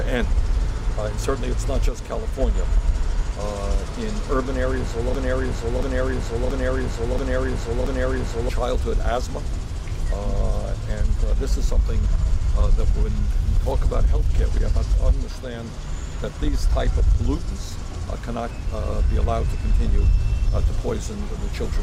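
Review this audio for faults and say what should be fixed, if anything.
From 5.15 to 8.49 s there's a broken-record loop: a 0.68 s slice of audio plays five times back to back, and whatever should have filled that stretch is simply gone. Most likely the player, encoder or stream stalled and kept resending the last fragment it held. To prevent it, set up the playback or encoding chain to fall silent or resync when its input runs dry, rather than replaying stale buffered data.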